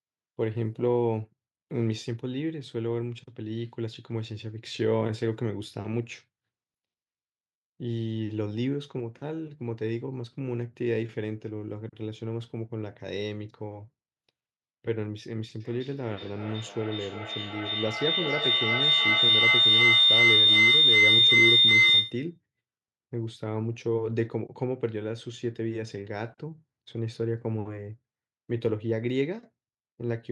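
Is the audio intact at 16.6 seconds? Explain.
No. From 15.6 to 22.37 s a feedback howl is under way: two devices in the same room share the call, so sound circles from loudspeaker to microphone with net gain each pass. The repeats swell into a tone near 4 kHz, repeating roughly every 400 ms and peaking about 9 dB above the speech.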